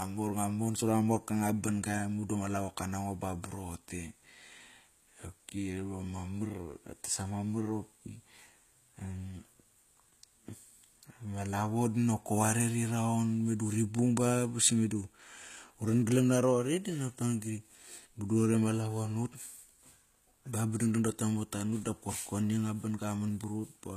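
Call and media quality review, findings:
HE-AAC compression, throughout: sibilants gritty, metallic and lispy, plainly audible; no content above 14.9 kHz. Likely HE-AAC at a low bitrate, around 20 kbps. Treble is rebuilt by band replication, so upper harmonics don't align with the coded lower band.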